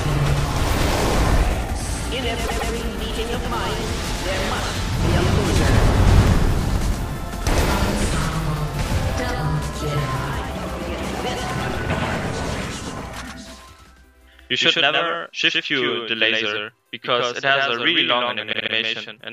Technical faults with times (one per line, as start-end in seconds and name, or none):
0.00-19.33 doubled audio track
2.46-2.70 repeated frames
6.21-7.02 processor overload crackle
18.52-18.74 repeated frames